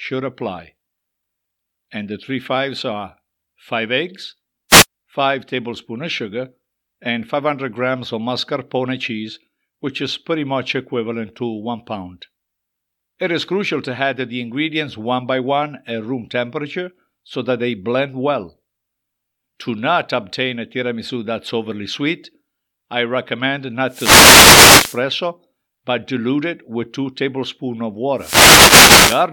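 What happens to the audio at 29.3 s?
The wireless microphone's radio signal fades from cancelling reflections, a wireless microphone noise hit: from 28.16 to 29.27 s, just after "tablespoons of", receiver noise rises into a short burst of static.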